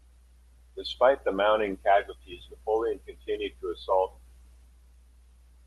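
Nothing in this speech stands out as a technical fault, and the call link it travelled over just leaves its usual mark, with the top end rolling off at around 12 kHz as you'd expect from a call codec.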